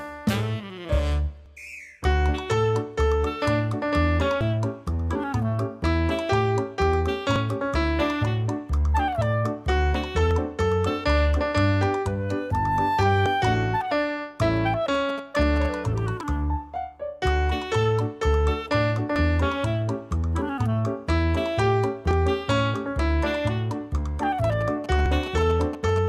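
The audio skips nine times, regularly about every 2.95 s from 1.46 s to 25.06 s, each losing roughly 50 ms with the two sides butted together. This is audio missing between chunks, likely from 3 s processing blocks dropping material at each handover. GSM signalling bursts appear from 14.94 to 15.66 s and from 24.52 to 25.99 s as a galloping dit-dit-dit of short 217 Hz buzzes, about 15 dB below the signal, from a nearby 2G phone's signalling bursts being rectified in the audio circuit.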